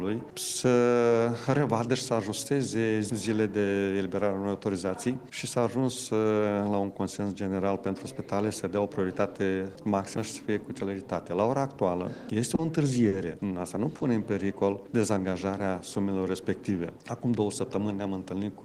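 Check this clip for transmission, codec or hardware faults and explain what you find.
Three kinds of transmission fault occur close together near the end, all from jitter-buffer handling of uneven packet arrival.

Short stall from a late packet, at 12.55 s, 13.08 s and 13.96 s: each time a sound is briefly held too long, with a faint buzz or dip, for 30, 40 and 40 ms. A packet arrived late, the buffer ran dry, and the receiver stretched the last sound until it came. Nothing is lost.

Jitter buffer slow-down, from 14.53 to 15.60 s: the audio drags to about 95% speed at unchanged pitch, with drawn-out sounds. With the buffer low, the receiver repeated single pitch periods to rebuild a reserve, adding 66 ms in total.

Jitter buffer speed-up, from 17.58 to 18.09 s: the audio hurries to about 112% speed, pitch unchanged. The buffer held more than its target, so the receiver trimmed short pitch-period pieces repeatedly, removing about 70 ms to cut the delay.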